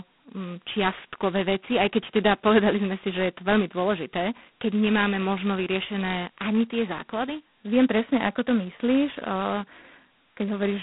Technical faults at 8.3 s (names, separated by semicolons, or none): G.726 ADPCM